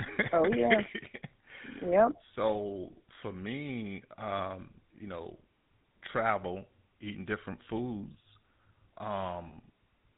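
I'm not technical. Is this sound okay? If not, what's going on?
No. The whole clip has the sound of the GSM full-rate codec, an early mobile-phone system. Nothing above 4 kHz gets through, so it sounds dull, and there's a buzzy, gravelly roughness on top. That roughness is what sets it apart from speech that's simply muffled.

There are also two lost GSM frames, at 4.38–4.41 s and 9.48–9.56 s. Each time, a short piece of data went missing and the last good piece was repeated. You hear a brief rough, metallic ring there instead of a silent gap.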